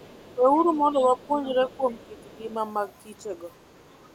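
Right at the start, 0 to 0.37 s, you get the other side's voice leaking through, faint, roughly 30 dB under the talker. That's likely loudspeaker echo the canceller didn't fully remove. It keeps coming back at 0.53–0.66, 0.95–1.07, 1.44–1.77, 1.99–2.37 and 3.78–4.12 s, somewhere around 25 to 40 dB down.

From 0.37 to 2.49 s there's speech suppressed in double talk. The talker dips by about 5 dB for around a second and a half in total, likely because the canceller turned everything down while both sides were talking at once.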